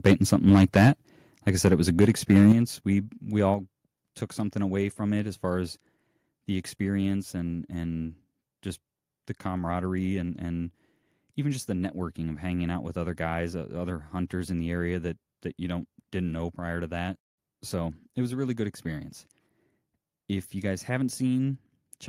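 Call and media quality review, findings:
Microphone overload, 0.06–0.88 s: harsh crackle on the loudest syllables, peaks about 6 dB past the converter's limit, around 7% of samples flattened. Likely input gain set too high at the converter. Waveform shows squared-off tops; spectrogram shows broadband smear above the harmonics.

Microphone overload, 2.0–2.52 s, just after "it was a": same crackling edge, about 3 dB over, roughly 7% of samples clipped. Likely the same excessive input gain. Flat-topped peaks, vertical splatter on spectrogram.

Microphone volume stepped down, 2.52 s: abrupt drop of about 7 dB in voice and background together, right after the distorted peak. Likely call software cutting device input gain in one step. Waveform envelope shrinks instantly; spectrogram darkens across all bands at once.

Microphone volume stepped down, 3.54 s: second step, about 4 dB further down, same sudden level loss. 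Likely a follow-up automatic gain cut. Visible as another clean vertical boundary in the envelope.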